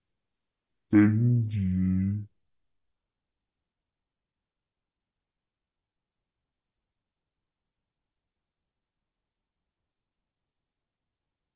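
Throughout the clip, a wrong sample rate: samples are clocked out at half their recorded rate with no conversion, which fits 16 kHz material played at 8 kHz. The speech runs at half speed and an octave lower, sounding slow, deep and dragged.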